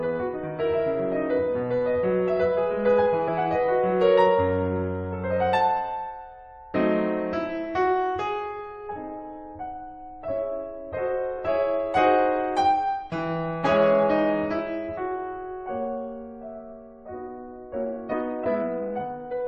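At 3.27 s, 7.33 to 7.35 s and 11.38 s, damaged data in a compressed stream causes brief glitches. The decoder misreads corrupted frames and resyncs. From 17.54 s to the end, a time-stretched section plays the music 1.58 times faster at unchanged pitch. It sounds rushed, likely from software squeezing it to fit a length. Within it, at 18.12 to 18.14 s, another corrupted-frame blip occurs.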